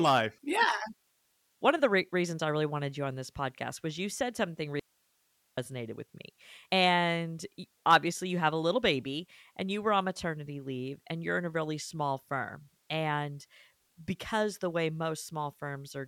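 At 4.80 s the speech drops out abruptly for about 780 ms, until 5.58 s, leaving only faint hiss roughly 40 dB below the signal. This audio dropout to a faint residue likely comes from a brief loss of signal upstream while the chain stayed live. On a waveform the envelope collapses to a thin noise band with sharp edges. On a spectrogram it shows as a near-empty vertical stripe of low-level broadband noise.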